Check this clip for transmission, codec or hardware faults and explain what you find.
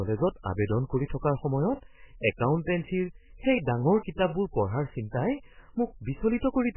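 One codec fault runs through the whole recording. The speech has nothing above 3 kHz and sounds watery, which likely points to MP3 compression at a very low bitrate, near 8 kbps. Starved of bits, the encoder cut the treble and dropped weak detail, so consonants smear and swirl.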